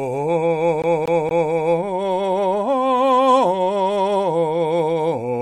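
At 0.82–1.53 s, a CD stuck on one turn: the laser jumps back, replaying one 0.24 s slice three times, evenly, unlike random dropouts.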